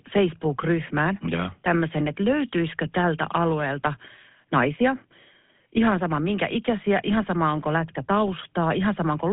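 GSM full-rate codec damage runs through the whole speech clip: the voice has that buzzy, gravelly roughness from regular-pulse excitation driving a vocal-tract model, which fits the 13 kbps full-rate coder. The band sits roughly 150 Hz to 3.5 kHz, with nothing above 3.8 kHz.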